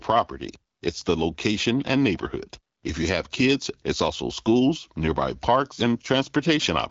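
No technical faults can be heard in the speech, which has passed through the AMR wideband (HD Voice) codec at 12.65 kbit/s, leaving only light coding texture and no content above about 7.6 kHz.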